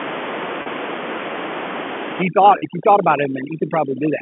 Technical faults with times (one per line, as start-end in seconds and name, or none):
0.62-0.66 packet loss with pitch repetition
2.22-4.22 overdone noise removal
2.58-2.62 packet loss with pitch repetition